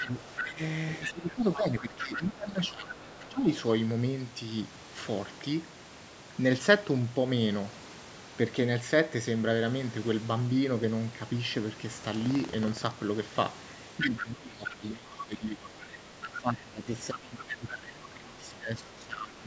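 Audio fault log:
0.00–0.45 s and 1.02–3.33 s, other side's voice leaking through. A second voice sits under the talker. It is about 5 dB below the speech at first, then about 10 dB below. The likely cause is a loudspeaker echo that the canceller did not fully remove.
0.02–3.50 s, speech suppressed in double talk. The talker's level dips by up to about 15 dB, in pieces totalling about two seconds. Both sides were likely talking at once, so the canceller turned everything down.
12.12–12.95 s, buffer tearing. A low robotic rattle of 21.5 Hz rides on the sound. It fits a 2048-sample buffer whose write and read positions cross. A small part of each period, a few percent, repeats audio from about 100 ms earlier. Hard joins at each crossing make the rattle.
14.00–19.47 s, speech suppressed in double talk. The talker dips by up to about 20 dB, across roughly five seconds in total. Simultaneous talk likely made the canceller duck both sides.
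14.18–14.75 s, 15.81–16.41 s and 17.38–17.55 s, other side's voice leaking through. Short scraps of a second voice break through, about 10 to 15 dB below the talker. These are likely loudspeaker echo left behind by the canceller.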